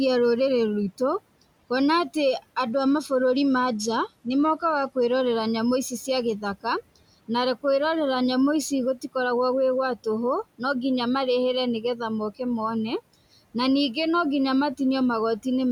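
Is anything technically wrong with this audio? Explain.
Yes, there's a Bluetooth SBC bit pool drop from 2.71 to 5.22 s. The link seems to have got congested, and the phone cut the bit pool to keep the stream going. The sound fits a halving from about 28 to 14, around 108 kbps. With so few bits, the top sub-bands get starved and the rest are quantised coarsely. The speech goes dull, with the treble dulled, and a gritty grain rides on it until the quality recovers. The room noise, sitting about 22 dB under the speech, belongs to the recording itself.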